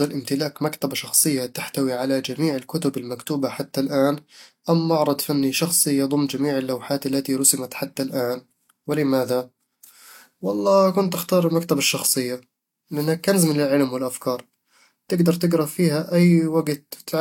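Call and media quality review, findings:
Speech, throughout: layered coding artefacts, two different kinds heard together; likely transcoding between lossy codecs, a Vorbis-like stage near 68 kbit/s re-encoded as HE-AAC near 48 kbit/s. Spectrogram: hard ceiling at 19.8 kHz.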